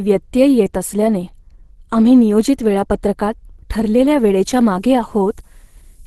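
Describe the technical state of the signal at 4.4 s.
At 4.4 s the speech sits inside a stretch of low bit depth with noise shaping. It runs from 4.12 s to the end. The signal is reduced to about 9 bits. The rounding error is fed back and pushed upward in frequency. The result is a steady, thin hiss, roughly 30 dB below the speech, that climbs toward the top of the band.

The speech is also muffled and hoarse, with nothing above 12.1 kHz. The codec damage is plainly audible. This is likely Opus compression at around 16 kb/s in its hybrid speech mode. That mode trims the top of the spectrum and roughens the voice.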